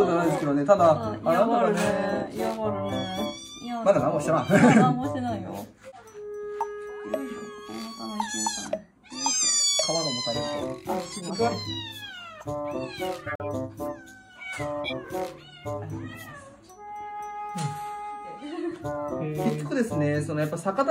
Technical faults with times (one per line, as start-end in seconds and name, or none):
5.84-6.00 corrupt frame decoded
11.13-11.34 corrupt frame decoded
13.13-13.46 corrupt frame muted
14.84-14.93 corrupt frame decoded